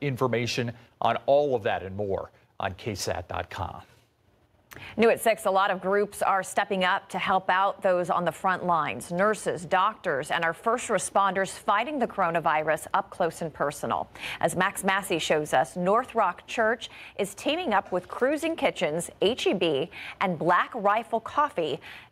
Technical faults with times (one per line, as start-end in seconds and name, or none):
none